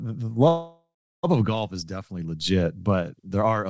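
Speech over a G.722 call path, with nothing above 8 kHz, has a call audio freeze from 0.48 to 1.25 s, just before "of golf". The sound stretches into a fading buzz that settles to about 0.33 s of silence, likely from delayed packets draining the jitter buffer. Nothing is lost and the rest arrives later. On a waveform and spectrogram, this appears as a decaying smear, then a flat gap.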